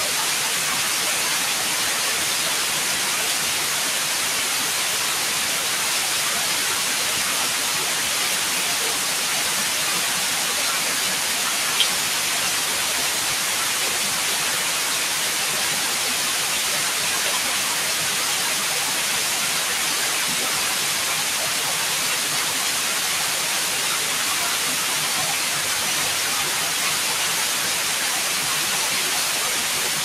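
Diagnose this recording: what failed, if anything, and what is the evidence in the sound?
Nothing in the signal chain has failed: the sounds in this recording arrive intact, with steady level, continuous timing and no audible disturbance at any stage between capture and playback.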